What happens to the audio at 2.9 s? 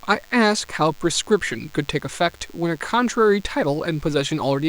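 At 2.9 s you're hearing DECT cordless phone buzz. It isn't limited to that moment and runs steadily from start to finish under the speech. A nearby DECT handset or base fires a short radio burst every 10 ms, and something in the audio chain rectifies it. That produces a thin, buzzy 100 Hz tone stacked with harmonics. It sits quite low, about 30 dB below the speech, but it's constant.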